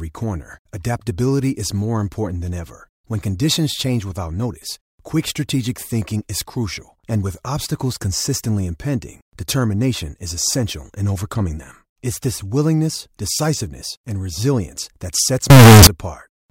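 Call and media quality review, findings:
Float read as integer, 15.50–15.87 s. Likely 32-bit float samples handed to a stage expecting 32-bit integer, so sign and exponent bits set the level. Speech goes near-square at an almost fixed, high level: very loud, harsh, background noise matching speech.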